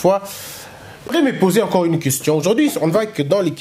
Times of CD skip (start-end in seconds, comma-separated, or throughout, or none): 1.08